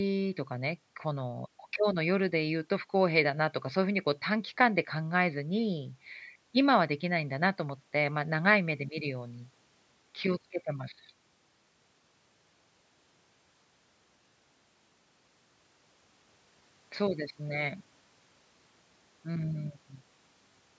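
Listening to the speech, nothing stood out as a technical fault; the only trace of processing is the ordinary call-microphone treatment, with nothing above 8 kHz.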